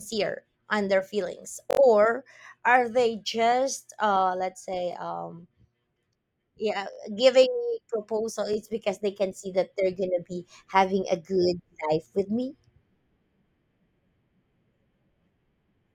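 The speech stutters with a repeated buffer at 1.71–1.79 s, 4.93–4.95 s, 6.93–6.98 s and 8.53–8.56 s. Fresh audio arrived late, so the same 21 ms chunk replayed with hard joins, four times at the first point. That fits a 1024-sample buffer, and almost nothing seems lost.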